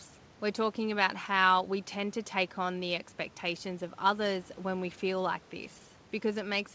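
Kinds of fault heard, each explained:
Nothing stood out on listening to this speech clip, which comes across as a normal call over a wideband codec with no content above 8 kHz.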